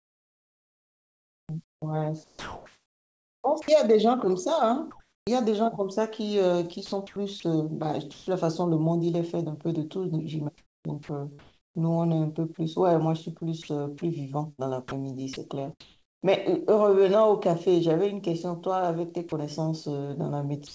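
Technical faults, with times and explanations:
0.00–5.27 s, 6.86–8.27 s and 13.62–16.31 s: sound chopped by the voice detector. Quiet syllables and word edges drop into synthetic noise, about 3.3 s, 0.33 s and 0.57 s in total, so the speech is choppy. The likely cause is the sender's detector repeatedly toggling transmission.
10.58–11.87 s: comfort noise in place of the background. For about 0.69 s the real room tone gives way to a flat, featureless hiss. The likely cause is discontinuous transmission, with the receiver generating shaped noise while the sender stays silent.
11.03–11.09 s, 19.29–19.32 s and 20.67–20.73 s: sound dropped by the voice detector. Brief stretches of speech, about 50 ms, 30 ms and 61 ms, vanish under steady noise. The likely cause is the detector mistaking quiet speech for background and pausing transmission.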